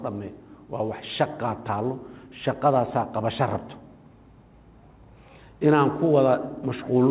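No technical faults are audible.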